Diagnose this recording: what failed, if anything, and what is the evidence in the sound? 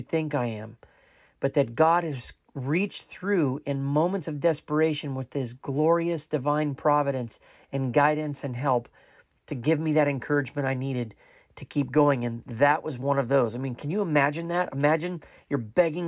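Nothing failed in this recording, and the sound gives no evidence of a fault at any stage.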